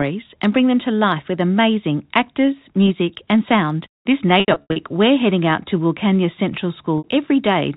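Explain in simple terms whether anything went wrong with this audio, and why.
Packet loss with pitch repetition occurs from 4.40 to 4.76 s and again at 6.98 to 7.04 s. Missing bits of speech were patched by repeating the last sound, giving a brief buzzy hold that fades into silence on the longer gaps before the speech returns.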